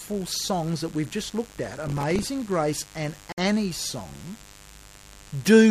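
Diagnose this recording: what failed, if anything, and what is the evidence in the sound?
Analogue wiring: a steady, raspy mains buzz at 50 Hz sits about 25 dB below the sound throughout. Switching spikes from a dimmer, rectifier or missing shield are leaking in.

Driver or buffer stage: from 1.59 to 2.27 s there's processor overload crackle. Buffers of roughly 3 ms keep missing their deadlines, around twenty of them, each replaying stale audio with hard edges.

Streaming playback: at 3.32 to 3.38 s there's a gap between stream segments, a 55.8 ms hard-edged silence. Mismatched timestamps at a segment boundary, fitting 2-second segments, left a hole that got filled with nothing.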